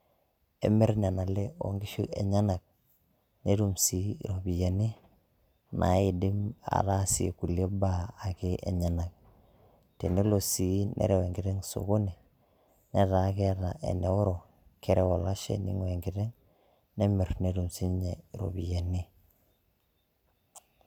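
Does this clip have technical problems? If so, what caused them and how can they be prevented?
No, nothing technical goes wrong in this speech clip, so there's nothing here that needs preventing.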